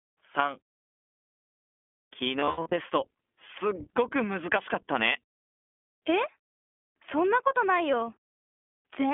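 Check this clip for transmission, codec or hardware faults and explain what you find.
Two faults are present: the whole clip passes through an iLBC codec, and a burst of lost iLBC frames occurs between 2.40 and 2.74 s.

iLBC codec: throughout, the speech is confined to a telephone band of 250 Hz to 3.4 kHz and sounds plainly rough and synthetic. Each 20 ms frame is coded on its own, which fits the 15.2 kbps mode. A spectrogram shows energy cut off sharply at both band edges.

Lost iLBC frames: from 2.40 to 2.74 s, about 220 ms of audio is missing, scattered over 320 ms, with the longest gap around 70 ms. The decoder fills each gap by repeating the last pitch cycle mixed with noise, heard as a brief buzzy, held vowel. The waveform shows repeated pitch cycles mixed with noise, and the spectrogram shows flat, smeared harmonics.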